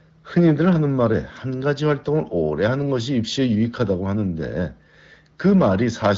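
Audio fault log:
5.45–6.11 s, hard clipping: near the end of the speech, a stage in the chain receives a signal about 7 dB louder than it can pass, so every peak in this stretch is cut off flat instead of following its natural curve. Those squared-off tops create harmonics high in the spectrum, heard as added distortion on the louder syllables.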